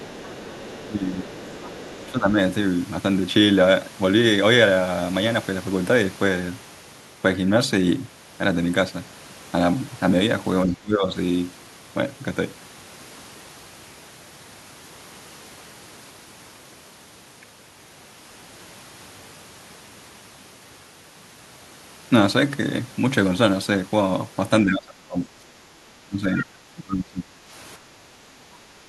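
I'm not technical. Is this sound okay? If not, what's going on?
No. From 0.0 to 0.85 s and again from 1.2 to 2.11 s, a faint second voice can be heard underneath. This is the other side's voice leaking through, likely from a loudspeaker that the echo canceller didn't fully clean out.

At 0.86 to 1.32 s, 2.07 to 2.38 s, 10.65 to 11.1 s and 24.64 to 27.36 s, the talker's voice drops away, sometimes sharply. This is speech suppressed in double talk: both sides likely spoke at once, and the canceller turned everything down.

From 27.78 s to the end, the room sound briefly dips. This is background gated by the echo canceller, which clamped the microphone down while the loudspeaker played.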